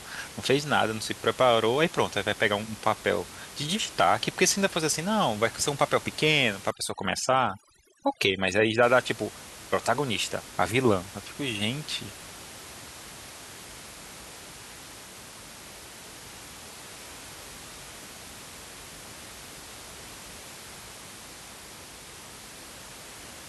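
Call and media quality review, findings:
Overdone noise removal, 6.71 to 8.83 s: over-aggressive suppression gating bands near the noise estimate, leaving twinkling specks; room noise about 17 dB below speech.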